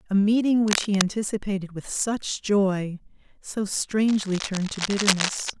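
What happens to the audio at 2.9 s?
Nothing goes wrong at 2.9 s; the speech carries on intact through that moment with no audible fault.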